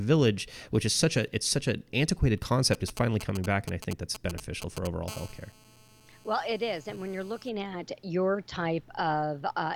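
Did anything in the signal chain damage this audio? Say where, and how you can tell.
Yes. GSM signalling bursts entered the analogue wiring: a nearby 2G phone's radio pulses were rectified, giving galloping ticks and brief 217 Hz buzzes from 2.74 to 4.87 s, after "it's such an antiquated", roughly 10 dB below the speech.

A GSM phone buzz also entered the analogue wiring: a nearby 2G phone in a call transmits 217 bursts per second, rectified into a steady, raspy 217 Hz buzz about 23 dB below the speech, from 5.08 to 7.49 s, just before "at your".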